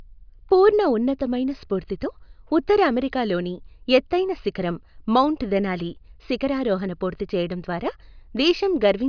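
Listening closely to the recording turned up nothing that stood out as a technical problem at any point.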